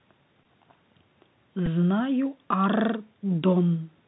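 Bluetooth CVSD headset codec, present throughout the speech: the signal is coded as a single up-or-down bit per sample, which fits a 64 kbps link, with an adapting step size. Everything above 4 kHz is gone, so the speech sounds narrow and boxy. Where loud high-frequency energy arrives faster than the step can follow, the waveform is smeared into distortion, sibilants turn scratchy, and a grainy hiss sits under the whole clip, all plainly audible.

Bluetooth headset packet repeated, at 0.44 s and again at 1.66 s: voice packets between headset and phone went missing, and the chip filled the gaps by decoding the previous packet again. At 0.44 s about 15 ms is replaced, which fits four lost packets. Repeating a 3.75 ms block produces a brief buzz near 267 Hz. At 1.66 s the gap is 7.5 ms, pointing to two packets, and it sounds shorter.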